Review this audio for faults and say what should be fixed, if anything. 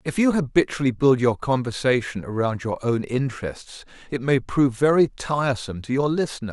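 Nothing to fix, as no faults turn up anywhere in the speech recording.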